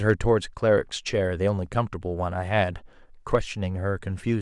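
Speech with brief hard clipping from 0.09 to 0.12 s and at 3.35 s, where peaks overshoot the converter's limit by about 2 dB. The waveform shows flattened tops, and the spectrogram shows a thin vertical smear of high harmonics.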